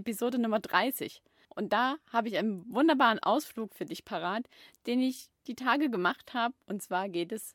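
Nothing in the recording reveals any audible technical fault.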